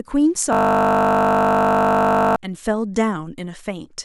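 System hang loop from 0.53 to 2.36 s: the playback system froze while the audio hardware kept replaying its ring buffer, so one 20 ms slice of speech repeats exactly 92 times. The repeats sound like a steady 50 Hz buzz replacing the speech.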